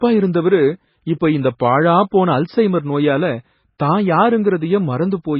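Speech, and it's been squeezed hard. Across the whole clip there's nothing above about 5.5 kHz, and the rest has that watery, swirly texture where quieter frequency detail keeps flickering in and out. That heavy damage is most likely MP3 compression at a very low bitrate, something around 16 kbps. At that rate the encoder gives up the top end and drops weak components frame by frame. Pre-echo shows up at 1.2 s, 1.59 s and 2.11 s, where a short hiss arrives just ahead of a sharp onset, smeared forward by 18 ms, 12 ms and 15 ms respectively. The codec spreads its quantisation noise evenly over each block, so when an attack lands late in a block, noise sized for the loud part leaks into the quiet moment before it and softens the attack.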